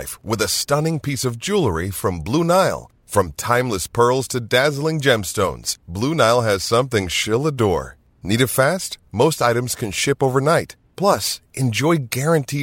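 No technical faults can be heard anywhere in this speech recording.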